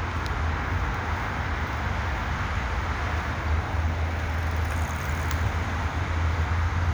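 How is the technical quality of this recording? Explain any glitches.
No glitches can be heard anywhere in the recording. There is nothing in it that needs explaining.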